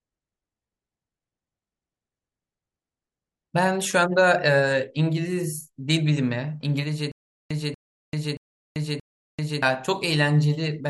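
From 7.12 to 9.62 s, a stutter with silent gaps: a 238 ms fragment repeats four times, each followed by about 389 ms of digital silence, likely a stalled stream.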